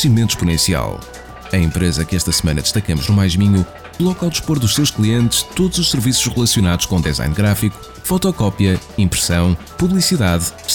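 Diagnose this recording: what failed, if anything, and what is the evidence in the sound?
Hard clipping throughout: peaks exceed a converter or sample-format limit by about 1 dB, flattening well under one percent of samples and crackling on loud peaks.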